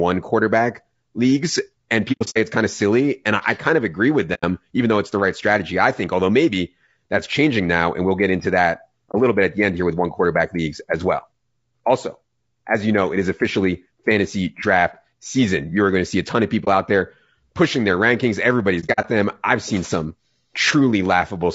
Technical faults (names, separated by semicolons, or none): low-delay AAC compression; AAC frame loss with muting